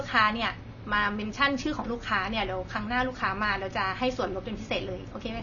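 The speech sounds dull and smeared throughout, with nothing above 6.9 kHz. Sibilants fizz and warble. The likely cause is AAC compression at a low bitrate, near 24 kbps.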